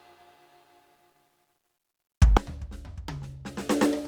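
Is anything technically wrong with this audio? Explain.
Yes. From 2.37 s to the end of this music clip, the level falls by about 25 dB, leaving only a faint residue. This is likely one channel inverted: with reversed polarity on one side, everything common to both channels cancels in mono, leaving just their difference.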